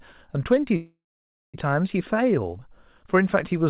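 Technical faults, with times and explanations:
0.76–1.56 s, call audio freeze: the speech stalls into a fading buzz, then 0.55 s of silence. Delayed packets likely drained the jitter buffer. Speech resumes intact, 0.78 s late.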